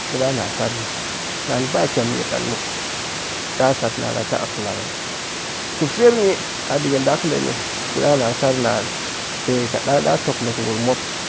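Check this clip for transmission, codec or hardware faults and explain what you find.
No transmission, codec or hardware faults can be heard in the speech. The call's microphone processing leaves nothing above 8 kHz, and the room's background noise sits about 10 dB below the talking, both normal parts of the recording.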